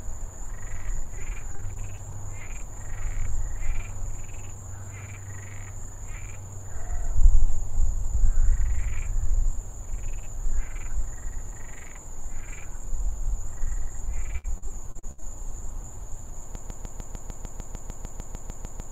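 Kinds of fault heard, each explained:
Repeated packet loss (robotic sound): Choppy stretches from 1.03 to 2.18 s and 14.38 to 15.24 s, where short holes keep being patched by extending the last sound. The later burst is harsher, with gaps up to 68 ms and about a third concealed.
Broken-record loop: From 16.55 s to the end, a 150 ms fragment repeats exactly, back to back, in a mechanical stutter, and the audio that should follow never arrives. This is likely a stalled player or stream resending the last piece it held.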